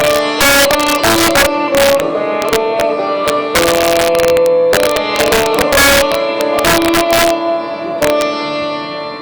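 Integer overflow throughout the audio: peaks about 6 dB over the limit wrap to the opposite sign, giving cracks much sharper than clipping's flattening.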